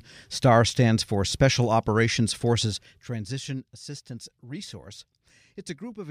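No technical faults are audible.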